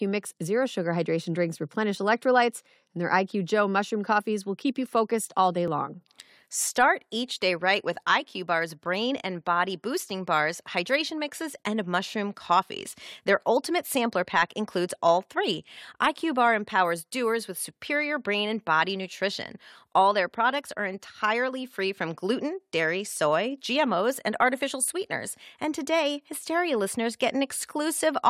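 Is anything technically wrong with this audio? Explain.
Yes. The speech skips four times, at 5.68, 11.66, 17.65 and 23.66 s. This is overlap between stream segments. The gaps fall about 6 s apart, matching a stream cut into 6-second segments. At each boundary, the time stamps of neighbouring segments overlap. The player discards the overlapping portion, though that audio was never actually duplicated. Between 17 and 19 ms of speech disappears each time. The waveform jumps, producing a short click or tiny skip at a steady interval.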